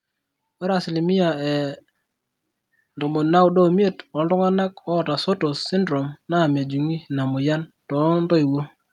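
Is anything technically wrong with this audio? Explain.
Yes. Automatic gain rising occurs twice, from 0.59 to 1.85 s and from 4.68 to 7.79 s. The gain control judged the input too quiet and gradually raised its gain, by about 4 dB and then about 3 dB, so speech and background noise swell up together.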